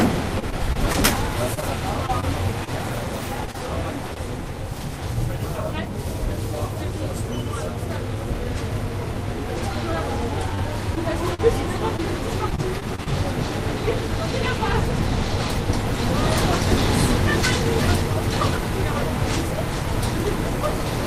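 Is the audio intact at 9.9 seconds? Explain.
Yes, at 9.9 seconds the sound plays through intact, with no dropout, click, distortion or other fault at that moment.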